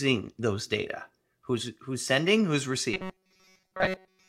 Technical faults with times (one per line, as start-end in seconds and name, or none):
2.94-4.28 robotic sound from repeated short buffers